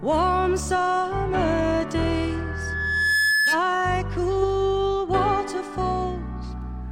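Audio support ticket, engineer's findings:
Loudspeaker feedback squeal, 2.31–3.64 s: a 1.7 kHz tone swells over roughly a second to about 5 dB above signal. Mic picks up its loudspeaker; loop gain exceeds one.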